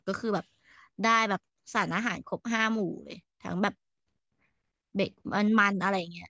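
Nothing in this recording trips any alarm; there's no fault here to point to anywhere along the way.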